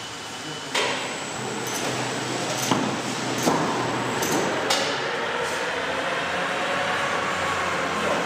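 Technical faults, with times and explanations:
1.35 s and 3.37 s: damaged data in a compressed stream. Corrupted bytes make the decoder misread frames and lose sync while it searches for the next frame header, producing a brief chirp or blip each time.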